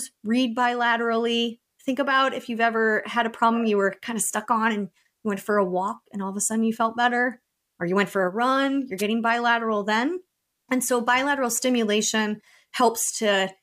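At about 8.98 s, just after "for a run you're", a wireless microphone noise hit cuts in. It lasts only about 50 ms and ends near 9.03 s, right before "bilateral then". It sounds like a brief swish of static over the speech. The cause is a momentary fade in the analogue FM radio link. Reflected signals cancel the direct one at the receiver. Its noise floor then jumps up and masks the voice until the signal recovers.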